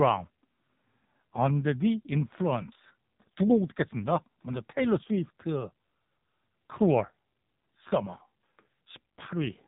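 From start to finish the speech carries the AMR narrowband mobile codec sound: nothing above about 3.8 kHz survives, and the voice is rebuilt by a vocal-tract model driven by sparse pulses every few milliseconds, leaving a buzzy, synthetic edge. The damage is heavy, which fits one of the codec's low modes, around 6 kbps. A plain telephone-band filter would only dull the top; this adds the robotic, pulse-driven texture of a speech codec.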